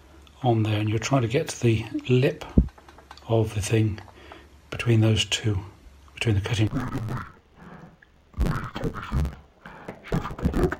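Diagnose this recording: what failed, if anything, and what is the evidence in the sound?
The failure is in sample-format conversion: interleaved audio read as planar. From 6.67 s to the end at 10.79 s, the sound turns dull and robotic, with a buzz near 92 Hz and no clear octave drop. Each 10.88 ms block is split into halves, so left and right samples are misassigned.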